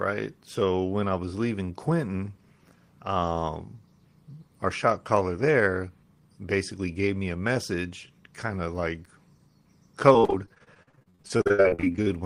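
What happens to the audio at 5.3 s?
Nothing goes wrong at 5.3 s: the speech there plays through intact, with no dropout, click or other technical fault.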